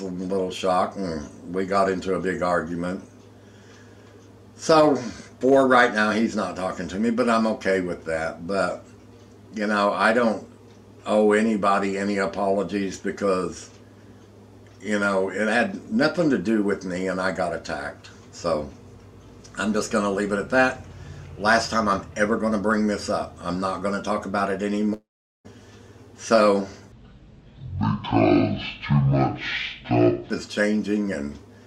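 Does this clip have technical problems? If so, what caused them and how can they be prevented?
Yes, two. From 24.93 to 25.47 s there's a long network dropout: about half a second of audio goes missing, the receiver briefly smears the last sound, then roughly 0.41 s of silence before audio resumes further on. Likely packet loss; a larger jitter buffer or a more stable connection would prevent it.

Then from 26.92 to 30.30 s there's a section at the wrong speed, playing at 0.52 times normal, so everything drags and sinks by around ten semitones. That likely comes from a clock or sample-rate mismatch in editing or playback; matching rates end to end prevents it.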